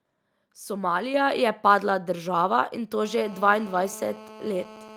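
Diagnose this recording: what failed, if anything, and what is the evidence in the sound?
At 1.14 s, just before "je padla država in", the microphone volume stepped up: speech and background noise both jump by about 5 dB at the same instant, and the level stays there. That points to call processing. Automatic gain control judged the input too quiet and raised the device's input volume in a single step instead of ramping it. Because the noise floor rises with the speech, the change came from the capture gain, not from the talker.

From 3.06 s to the end of the clip, right after "padla država in to", a hard, raspy GSM phone buzz sits under the speech at about 20 dB below the signal. Its fundamental is 217 Hz, with a dense harmonic series, and it is steady, which fits a nearby 2G handset in an active call. This is an analogue wiring fault. The handset's bursty RF is picked up and rectified in the audio circuitry, which turns the transmit burst rate into an audible buzz that has no relation to the speech.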